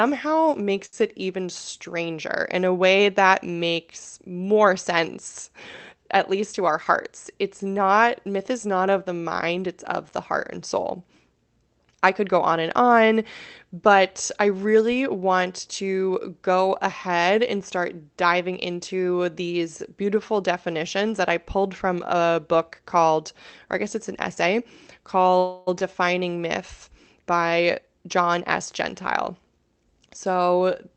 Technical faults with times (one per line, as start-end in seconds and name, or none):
0.85-0.95 short stall from a late packet
6.44-7.08 jitter buffer speed-up
25.38-25.69 call audio freeze
25.79-25.82 skip ahead
27.52-28.61 jitter buffer speed-up